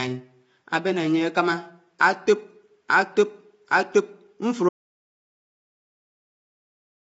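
A speech clip carrying low-delay AAC compression throughout, with plainly audible codec damage. The voice sounds rough and grainy, with noise filling the gaps between pitch harmonics, and nothing reaches above 7.7 kHz. The short transform frames of a low-delay AAC coder such as AAC-ELD resolve harmonics poorly and spend bits less efficiently. This is likely the cause here, and the degree of damage points to a low bitrate in the region of 24 kbps. At 4.69 s the signal drops out to silence and stays that way until the end of the clip. The gap is silent with no room tone underneath, so nothing was captured at all rather than something being very quiet. The likely cause is a loss of the input, such as a disconnected device, a failed link or an accidental mute, while the recording carried on writing empty samples.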